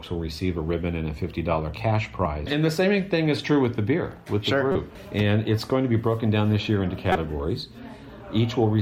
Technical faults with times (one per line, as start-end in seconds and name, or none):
2.25 damaged data in a compressed stream
4.72-4.75 damaged data in a compressed stream
7.12-7.15 damaged data in a compressed stream